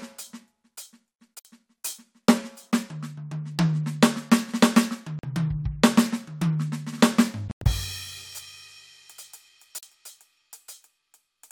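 Brief silent holes cut into the music at 1.39–1.45 s (58 ms), 5.19–5.24 s, 7.48–7.65 s (several gaps, longest 102 ms) and 9.78–9.83 s, likely Bluetooth dropout. Sound resumes further on rather than picking up where it stopped, which sets this apart from a stall.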